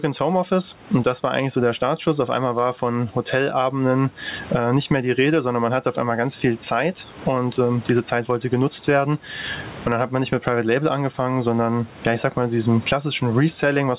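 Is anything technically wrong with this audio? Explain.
Yes. Gain pumping runs through the whole clip. The room noise swells between phrases and ducks under each loud syllable, by roughly 20 dB. The likely cause is input gain set far too high, with a fast limiter clamping every peak. Loud and soft parts sit squashed together.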